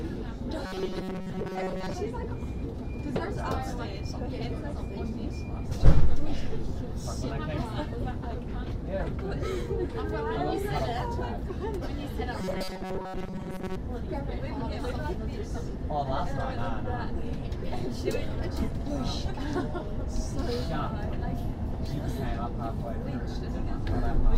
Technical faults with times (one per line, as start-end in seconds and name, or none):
0.66-1.94 robotic sound from repeated short buffers
12.40-13.76 robotic sound from repeated short buffers